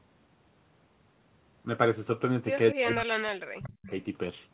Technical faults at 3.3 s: speech suppressed in double talk

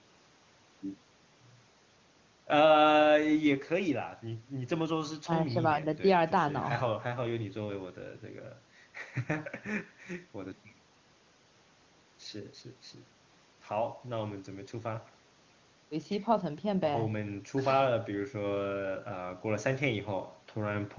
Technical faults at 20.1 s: none

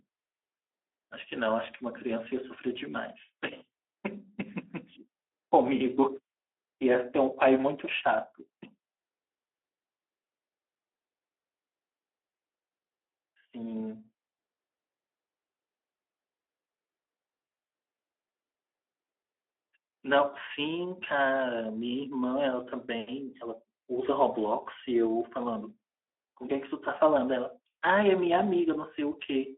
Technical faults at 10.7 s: Speex codec

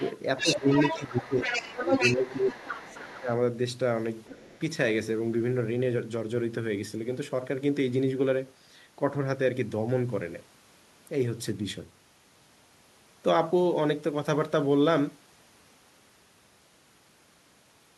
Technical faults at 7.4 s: none

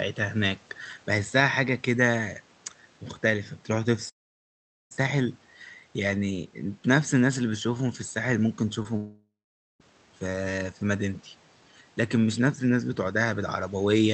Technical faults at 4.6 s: long network dropout

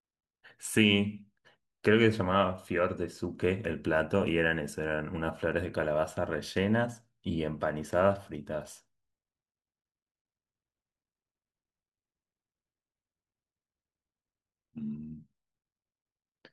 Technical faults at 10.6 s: none

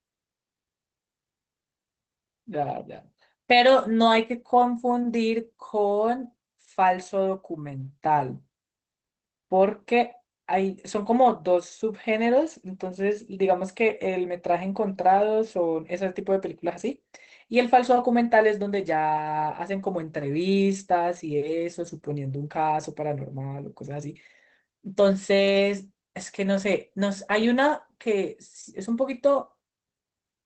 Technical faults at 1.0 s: Opus voice compression

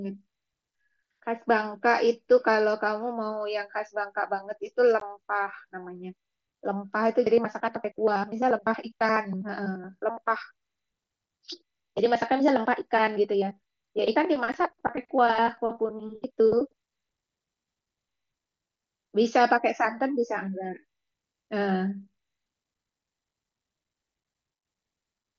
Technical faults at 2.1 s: none

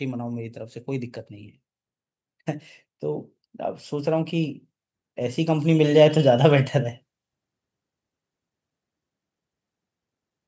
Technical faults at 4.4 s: none

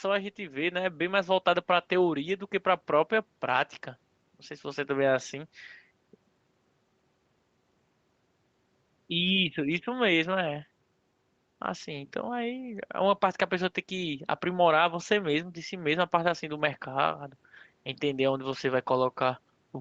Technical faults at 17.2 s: none

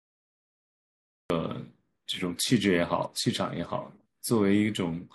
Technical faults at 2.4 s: none

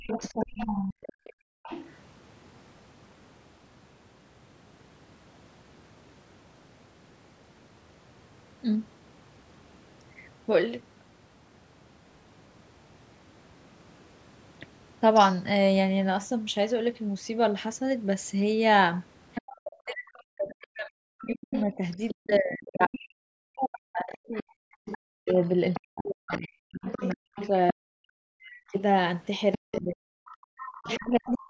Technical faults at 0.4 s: background gated by the echo canceller; other side's voice leaking through; speech suppressed in double talk

